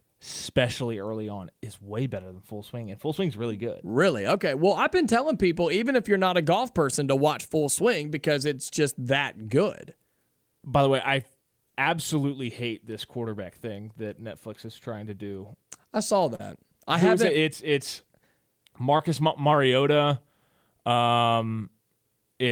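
Speech with two short concealed packet losses, at 16.35 to 16.41 s and 18.97 to 19.01 s, where about 40 and 20 ms were synthesised from preceding sound. These are brief smears rather than the hard silent gaps of dropouts.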